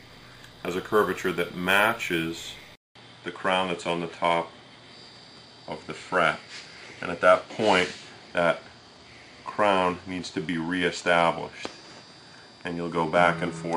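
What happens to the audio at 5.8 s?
At 5.8 s the audio is inside a stretch from 2.75 s to the end where the input likely switched to a poorer device. After a 200 ms gap it turns duller, the spectrogram cut off flat above 10.5 kHz, with a new noise floor about 40 dB down.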